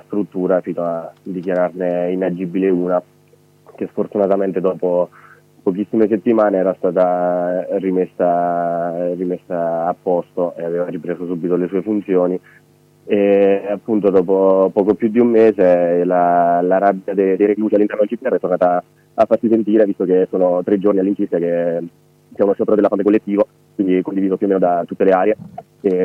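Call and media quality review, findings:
Time-stretched section, 17.14 s to end: pace jumps to 1.53x with pitch unchanged, rushed; likely time-scaling software dropping short segments to shorten duration.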